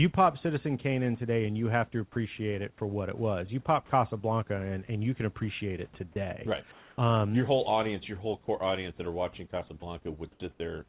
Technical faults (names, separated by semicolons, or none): sound dropped by the voice detector; comfort noise in place of the background